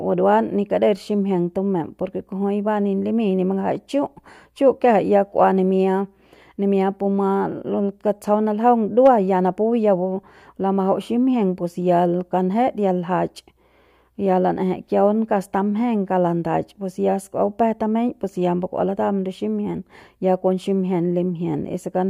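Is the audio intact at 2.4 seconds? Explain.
Yes, the speech at 2.4 seconds is intact, with no dropout, click, distortion or other fault at that moment.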